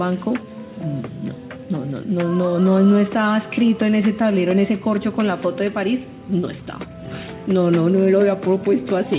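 Nothing goes wrong here: the sound comes over a normal call line with a G.711 mu-law codec at 64 kbps, so there's nothing above 4 kHz, and no faults turn up anywhere along the way.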